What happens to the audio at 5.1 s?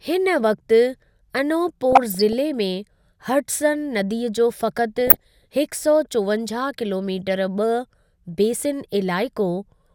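At 5.1 s the speech falls into DAB burbling, from 4.96 to 5.53 s. Bit errors slipping past error correction corrupt MP2 scale factors and samples, so single sub-bands jump in level frame by frame, giving bubbling, chirping squelches. A spectrogram shows short, bright rectangular patches in isolated frequency bands.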